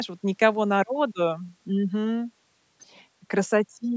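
No technical faults can be heard in this speech clip; the call microphone processing trims the lowest bass and leaves nothing above 8 kHz, which is normal for that path.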